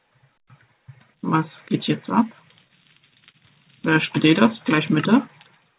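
From 2.68 to 3.36 s the audio stutters in repeated stalls: five times the jitter buffer ran dry and the receiver stretched the last sound, about 79 ms in all, longest 37 ms. Unlike dropouts, nothing is lost; the sound drags rather than cutting out, over a band that stops at 4 kHz, which fits G.711.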